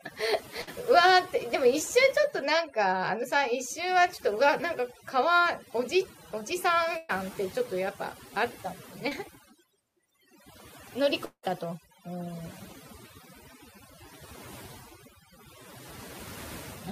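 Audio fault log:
Throughout: overdone noise removal. The background sits near silent with twinkling specks, because over-strong noise reduction is cutting bands that fall near its noise estimate.
0.61–0.69 s and 6.97–7.11 s: burst of packet loss. The sound stretches into a held buzz or fading hiss for about 60 ms, then 120 ms, and resumes further on with that stretch missing.
9.09–9.13 s: short concealed packet loss. A brief smear or wobble appears where about 20 ms never arrived in time and was filled by continuing the preceding sound, then blended back.
11.25–11.45 s: long network dropout. A fading buzz or hiss carries on for about 100 ms, followed by roughly 80 ms of silence, and the speech then returns further on, likely because no audio arrived for about 180 ms.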